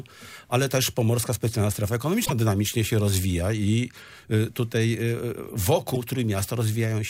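Damaged data in a compressed stream shows up twice, from 2.22 to 2.31 s and again from 5.94 to 5.97 s. At each point part of the encoded data is corrupted, so the decoder misreads the affected frames, loses sync and hunts for the next valid frame header before normal playback resumes. The result is a short, harsh squawk or blip breaking into the audio, lasting about 90 ms the first time and about 30 ms the second.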